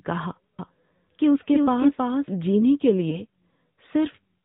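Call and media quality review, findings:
AMR narrowband mobile codec, whole clip: speech sounds buzzy and a bit synthetic, with nothing above 4 kHz. Typical narrowband mobile path. The damage is clearly audible and fits a mid-rate mode, around 10 kbps, where the few pulses per subframe leave the voice coarse.

Doubled audio track, 0.59–2.63 s: a full-band second copy trails the original by roughly 0.3 s, a few dB quieter. It has no reverb tail and cuts in and out abruptly. Likely a slower second capture path or an edit that left two out-of-step copies mixed together.

Lost AMR speech frames, 3.10–3.21 s: a brief dip and warble, then the voice returns slightly rough. This fits a single dropped 20 ms frame. The decoder bridged the gap by reusing the last good pitch and vocal tract settings at reduced gain, and needed a moment to recover.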